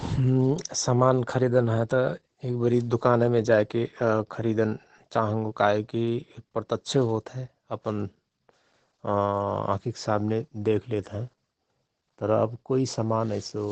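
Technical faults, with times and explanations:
Throughout: Opus voice compression. The speech has been squeezed through the SILK linear-prediction coder at wideband, consistent with a bitrate around 12 kbps and working in 20 ms frames. At that rate the excitation is coded coarsely, so the damage is plainly audible: the speech comes out muffled, hoarse and faintly robotic. Little remains in the top of the band, and nothing at all is heard above about 16.9 kHz.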